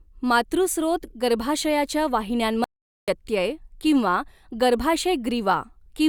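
At 2.64 s the speech cuts off abruptly and gives way to an audio dropout to silence lasting about 0.44 s, until it resumes mid-flow at 3.08 s. The gap holds pure silence with no room tone at all, which is what separates it from a natural pause or a noise gate closing, where some faint background usually remains. The cause is likely a momentary loss of the input signal while recording continued, so whatever was spoken in that stretch is gone.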